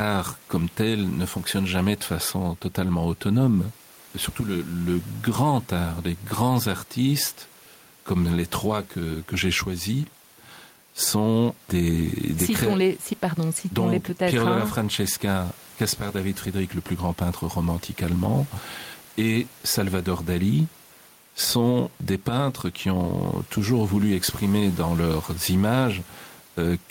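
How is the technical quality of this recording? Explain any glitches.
The recording has one audible fault running through the whole speech clip.

Gain pumping, throughout: the input gain is likely set too high, with a fast limiter or compressor cutting it back on every loud syllable. The room noise sits about 31 dB below the speech, and the gain swings by around 5 dB, so the level sounds squashed.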